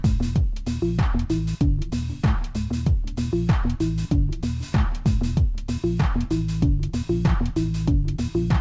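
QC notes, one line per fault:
Throughout: wrong sample rate. Everything runs slow and sits low, at about 0.73 times normal speed and roughly 5.5 semitones flat, because the audio is being clocked out more slowly than it was captured with no resampling in between. The ratio fits material recorded at 22 kHz being played back at 16 kHz. Since speed and pitch drop together by that single ratio, the whole clip sounds dragged and heavy rather than just detuned.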